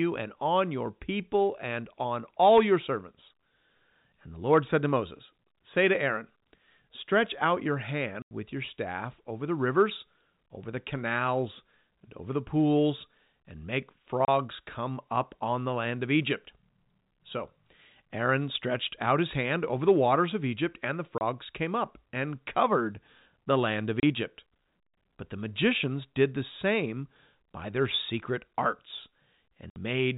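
Speech with five abrupt holes where the sound drops to dead silence: 8.22 s (about 90 ms), 14.25 s between "the pools and make" and "come up on the", 21.18 s between "and the" and "came up and covered", 24.0 s after "covered the land of", and 29.7 s (about 60 ms). The middle three last 30 ms each. This is packet loss filled with silence. Every gap is a multiple of 30 ms, which points to lost 30 ms packets replaced by silence on the G.711 telephone-band link.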